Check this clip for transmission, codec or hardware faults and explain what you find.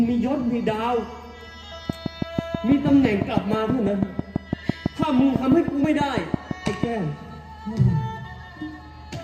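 There's one fault here: a train of clicks running from about 1.90 s to 6.85 s. It's a steady ticking at roughly six clicks per second, evenly spaced, around thirty in all, each much the same shape and peaking about 20 dB above the surrounding sound, so they poke right through, gaps included. The likely cause is a repeating pulse getting into the signal path, from nearby equipment interference or a faulty connection or power supply.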